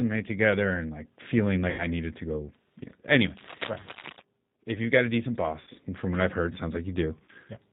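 Throughout the speech, the sound is band-limited, slightly rough and synthetic, with nothing above 4 kHz. That is the G.729 codec at 8 kbit/s, rebuilding each 10 ms frame from a vocal tract filter, a pitch predictor and a few pulses, with plainly audible damage.

From 1.70 to 1.86 s, between "together and like feeling" and "needed to go", the speech smears into a fading tone or coloured noise. This is VoIP packet loss concealed by the speech codec: about 80 ms of audio went missing, which fits four lost packets, and the decoder stretched its last pitch and filter while lowering the gain.

After "know anyway", from 3.35 to 4.23 s, uneven bursts of scratching rustle over the speech at about 10 dB below it. This is cable scratch noise, likely from a worn cable or connector being moved and changing its contact resistance.

Within that scratch, at 3.81 to 3.89 s, the same concealed loss covers a 60 ms gap. 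It returns at 5.61 to 5.70 s between "you've got a decent" and "and from what I've", another 60 ms gap, and once more at 7.24 to 7.32 s, where about 40 ms is missing.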